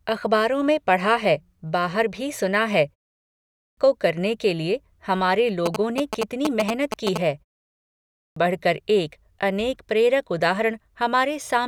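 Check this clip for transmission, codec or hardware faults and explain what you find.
Two kinds of fault are present: the playback device clipping the start of speech after pauses, and interference from a nearby mobile phone.

Clipped start after a pause, at 3.18 to 3.77 s and 7.81 to 8.36 s. After short gaps of 0.31 s and 0.45 s, the output device has to wake and relock, so about 0.59 s and 0.55 s of speech vanish. The first instance follows "बाहर भी सुना है", and the talking resumes abruptly at "को करने के लिए".

GSM signalling bursts, from 5.66 to 7.18 s, just after "करने के लिए हमारे". A nearby 2G phone exchanging control bursts with the network is rectified by the audio circuitry. This produces a galloping dit-dit-dit of short 217 Hz buzzes, at roughly the same loudness as the speech.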